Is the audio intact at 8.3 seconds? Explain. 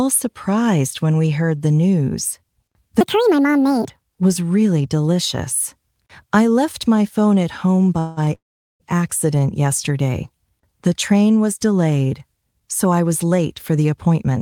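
No, not quite. Right around 8.25 to 8.29 s there's a short stall from a late packet: the jitter buffer ran dry for about 20 ms, so the last bit of sound gets held a touch too long. Nothing's lost, it just resumes where it left off, about 20 ms later.

Then from 8.35 to 8.82 s comes a call audio freeze, likely from packets held up in transit emptying the buffer. You get a brief fading tail, then roughly 0.42 s of silence. The audio picks up exactly where it stopped, so it's a 0.45 s gap inserted rather than anything missing.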